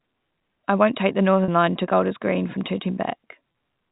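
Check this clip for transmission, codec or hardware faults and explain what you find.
Two short transmission dropouts are audible. The fault is packet loss with pitch repetition, at 1.44 to 1.48 s just after "I won't take the", and at 3.52 to 3.54 s. The receiver fills each gap, about 40 ms and 20 ms long and consistent with two lost 20 ms packets and then one, by looping the last pitch period. Both gaps come across as a brief, slightly buzzy hold on the sound. The 4 kHz ceiling of G.711 telephone coding is present throughout.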